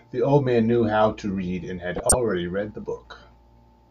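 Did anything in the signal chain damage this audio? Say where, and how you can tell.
Yes. From 1.96 to 2.14 s the speech is overrun by a loud burst that peaks around -5 dBFS. This is a corrupt frame decoded at the codec stage: flipped bits were played anyway, so misread gains spray energy across wrong frequencies for what sounds like several consecutive frames.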